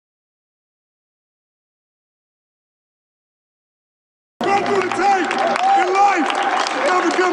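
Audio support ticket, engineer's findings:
Nothing stood out on listening; no findings to report for this clip.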